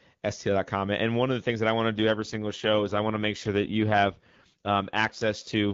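At 1.94 s an AMR rate drop begins and lasts to the end. The speech turns rougher and more synthetic, which fits a fall from about 23.85 to 8.85 kbit/s.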